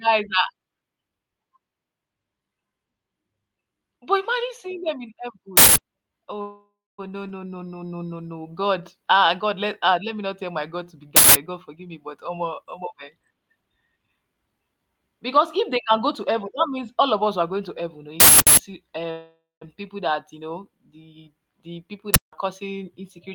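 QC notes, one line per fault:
5.57–5.76 s, 11.16–11.35 s, 18.20–18.57 s, 22.14–22.33 s: uninitialised buffer. Each is a sudden, loud burst of harsh digital noise that replaces the speech. A block was sent to playback before any audio had been written into it, so whatever values were left in that memory played as samples. Three bursts last about 186 ms, which fits an 8192-sample block. The 18.20 s burst is twice as long, about 372 ms, which fits a 16384-sample block.
6.41–7.00 s, 19.11–19.63 s: call audio freeze. The speech stops and the last sound carries on as a buzzy smear that decays into silence, about 240 ms of silence in the first case and about 160 ms in the second. The likely cause is delayed packets draining the jitter buffer, with the receiver extending the final sound while it waited. When audio returns it picks up exactly where it stopped, so nothing is lost. Instead, 570 ms and 502 ms of extra time are inserted and the delay grows by those amounts.
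11.69–14.47 s: jitter buffer speed-up. The speech runs at about 121% of normal speed and sounds hurried, but the pitch stays the same. Packets that had piled up left the receiver holding more audio than its target. To reduce that backlog, it repeatedly cut out short pitch-period-sized slices, removing roughly half a second over this stretch and pulling the delay back down.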